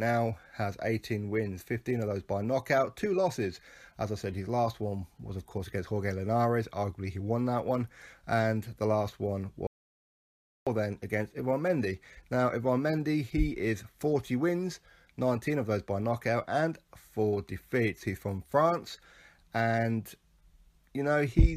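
At 9.67 s the sound cuts off abruptly and returns at 10.67 s, leaving an audio dropout to silence of almost exactly one second. The gap is dead silence rather than a quiet passage: no room tone, hiss or decay carries across it, so both edges are hard and the material simply resumes mid-flow. That points to the input having been lost upstream while recording continued, likely through a momentary disconnection or mute, and whatever occurred during that second is not recoverable.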